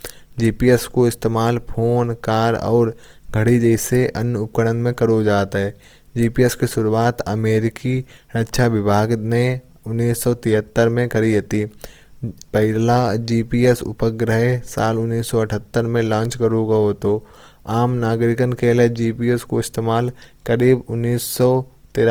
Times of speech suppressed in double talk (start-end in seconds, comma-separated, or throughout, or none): none